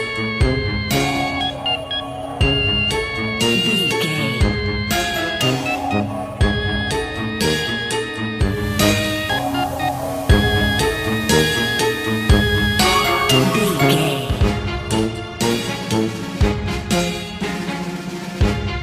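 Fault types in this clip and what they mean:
Digital radio blending to analogue: the receiver lost its digital stream at 8.36 s and cross-faded over about 0.41 s to the same station's FM broadcast, then blended back at 14.46 s. On a spectrogram, the FM stretch shows a hard ceiling near 15 kHz and a raised floor of broadband hiss, roughly 25 dB below the signal. On the waveform, the overall level steps by about 3 dB at each blend.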